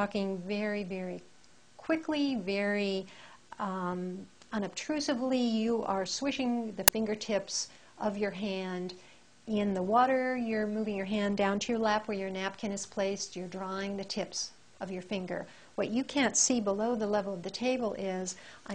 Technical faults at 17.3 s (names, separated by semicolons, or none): none